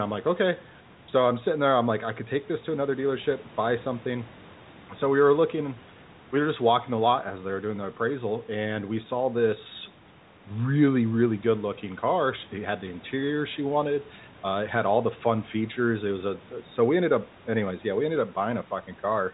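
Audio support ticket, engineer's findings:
Nothing to flag on this speech clip: it sits in the usual narrow telephone band with nothing above 4 kHz, the lowest bass is trimmed by the call's microphone processing as expected, and there's no fault to chase.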